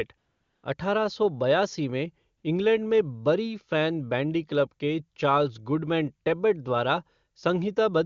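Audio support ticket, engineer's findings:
AMR comfort noise, 0.17 to 0.63 s and again 2.37 to 2.43 s: real background swapped for smooth synthetic hiss while the phone's silence detection stopped sending speech frames.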